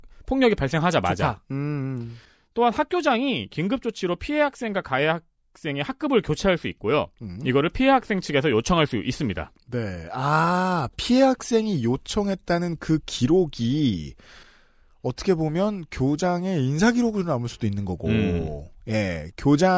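No technical faults can be heard in this speech recording.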